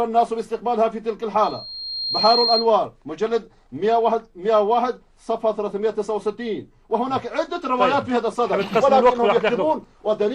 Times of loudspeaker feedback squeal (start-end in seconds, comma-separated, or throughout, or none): 1.43-2.69